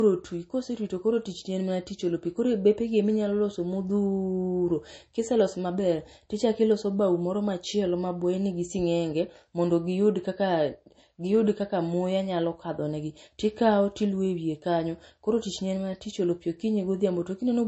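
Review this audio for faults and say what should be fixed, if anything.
Across the whole clip the speech has nothing above 8.3 kHz, and its sibilants sound smeared and swirly in the way of heavy MP3 compression, even though the file itself is encoded at a generous rate. This is low-bitrate audio saved at a high bitrate, likely a copy first squeezed to something like 32 kbit/s and then re-encoded higher, which cannot restore what was discarded. A plain low-pass filter would leave the same cut-off but without these codec artefacts. Prevent it by always encoding from the original uncompressed source.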